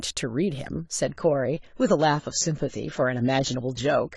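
An adaptive stream at a lower bitrate takes over at 1.07 s and runs to the end at 4.16 s. The player dropped to a cheaper encoding without a gap, so the speech abruptly loses everything above about 7.8 kHz and turns thin and smeary, which fits a 24 kbit/s AAC stream.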